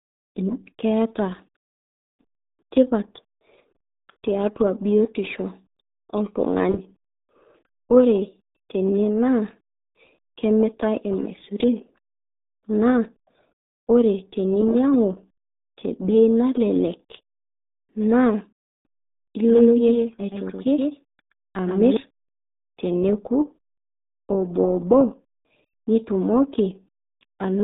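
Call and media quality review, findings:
RealAudio 14.4 codec across the whole speech path. Heavy damage: nothing above 3.8 kHz, band of roughly 200 Hz to 3.7 kHz, which fits an 8 kbit/s dial-up-era coder. Result is muffled, gargly speech with lost consonant detail.

Doubled audio track, 19.49 to 21.97 s, likely a second capture through a slower path mixed back in. Full-band copy trails by roughly 150 ms at about 5 dB down, with no decay or room colour. It cuts in and out abruptly.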